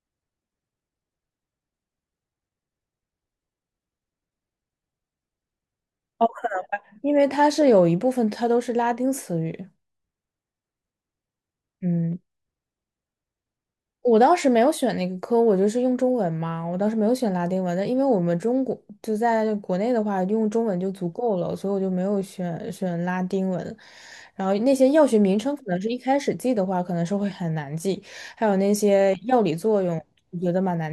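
No technical faults can be heard anywhere in the speech recording.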